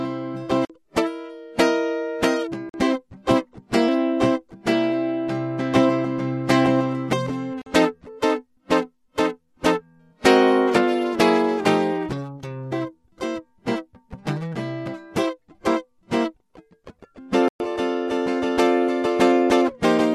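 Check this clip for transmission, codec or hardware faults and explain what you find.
The music drops out four times, each a block of digital silence. Short holes at 0.65 to 0.70 s, 2.69 to 2.74 s and 7.62 to 7.66 s each last about 46 ms, heard as a brief gap where the sound cuts off and returns. A longer hole of about 117 ms at 17.48 to 17.60 s is heard as a short hole in the music. The matching 46 ms lengths fit a 2048-sample buffer being left as zeros when the output wasn't filled in time.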